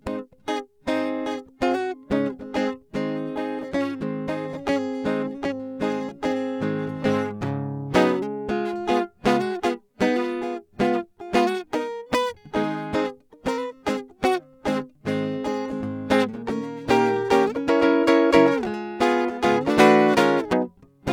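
Nothing technical stands out in this music clip, so there's no fault to point to at any moment along the way.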